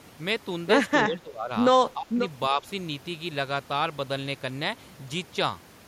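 Speech suppressed in double talk at 1.08 to 1.51 s, 1.94 to 2.2 s and 2.5 to 2.63 s: the speech dips by roughly 15 dB in the first two and only slightly in the third, likely an echo canceller mistaking simultaneous far-end talk for echo.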